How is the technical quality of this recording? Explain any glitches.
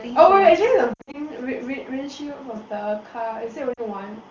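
The recording is wideband phone speech with two brief dropouts. The AMR wideband (HD Voice) codec path sounds clean and clear, which fits one of its higher bitrates.

Lost AMR speech frames occur from 0.93 to 1.16 s and again from 3.73 to 3.81 s. Radio errors corrupted frames, so the decoder repeated the last good speech settings at falling gain. The first burst drops about 140 ms scattered across 200 ms, with a longest run of 60 ms, producing warbling dips. The second gives a 40 ms near-silent gap.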